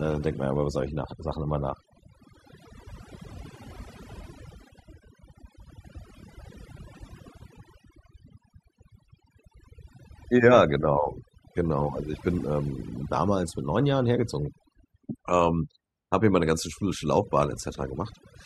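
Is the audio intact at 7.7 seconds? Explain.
No. At 7.7 seconds the speech is affected by overdone noise removal, which runs through the whole clip. Noise reduction set too strong pulls frequency bands near the noise level far down or off. Quiet parts of the voice vanish with them. The background drops and breaks up into twinkling specks.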